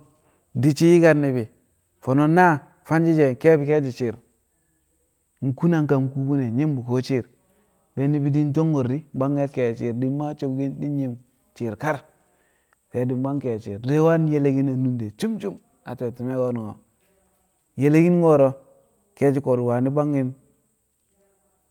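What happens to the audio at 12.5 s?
Nothing goes wrong at 12.5 s; the speech runs through that moment intact, with no dropout, click or distortion.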